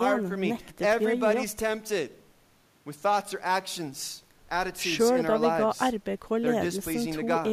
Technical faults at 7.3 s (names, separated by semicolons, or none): none